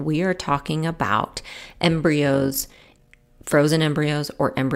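A speech recording that turns into a rough flutter from 2.34 to 3.16 s, its level pulsing by about 6 dB at around 50 times a second. That is overlap-add ripple: windowed frames rejoined with an overlap whose gains fail to sum evenly.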